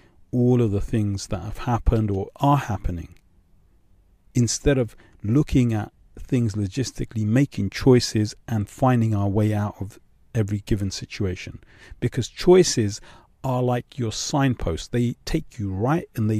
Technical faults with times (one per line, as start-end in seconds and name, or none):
none